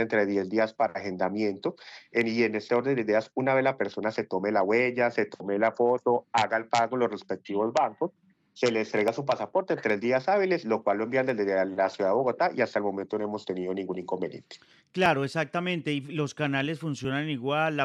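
Overlap between stream segments at 9.08 s, 15.06 s and 17.05 s: where two segments, which fit a 2-second segment length, claim overlapping time stamps, the player trims the overlap from audio that was never duplicated. Between roughly 10 and 19 ms of sound disappears each time, and the waveform jumps across the gap. Each event is heard as a brief click or tiny skip in the sound.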